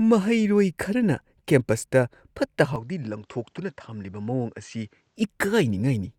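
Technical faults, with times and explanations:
2.76–5.16 s input switched to a poorer device: the recording likely jumped to a lesser input path without any gap. The speech then loses everything above 8.4 kHz, drops roughly 5 dB, and picks up a faint new background noise, sounding duller until the original input returns.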